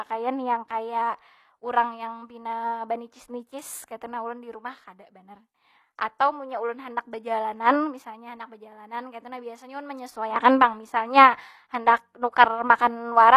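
Speech, carrying plainly audible HE-AAC compression damage from start to finish: the treble sounds bright but synthetic, with s sounds turning gritty and lispy. This is likely spectral band replication at a low rate, with a level of damage that fits roughly a 24 kbps stream. On a spectrogram the upper bands look like smeared, repeated copies of lower harmonics that no longer line up, and everything stops in a hard ceiling at 14.9 kHz.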